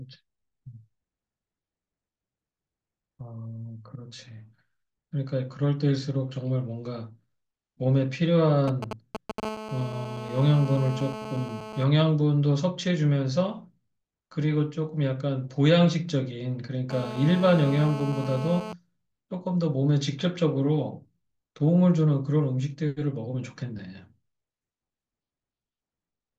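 From 8.68 to 9.40 s, GSM signalling bursts break in, nearly as loud as the speech. A nearby 2G handset is exchanging short control transmissions with the network, and the audio circuitry rectifies each radio burst into a click. What sets this apart from the steady buzz that follows is its rhythm. The bursts come in broken groups, a galloping dit-dit-dit of ticks and brief buzzy fragments, instead of a continuous tone.

At 9.43 s the pattern settles into GSM phone buzz, which runs until 11.84 s at about 12 dB below the speech. It returns from 16.90 to 18.73 s at about 11 dB below. Once the handset is in a call, it transmits in time slots 216.7 times per second, and the demodulated pulses produce a hard, raspy buzz dense with harmonics. Mains hum would sit at 50 or 60 Hz and sound smoother. This buzz sits at 217 Hz, has a gritty, pulse-like edge, and stays steady regardless of what the speech is doing.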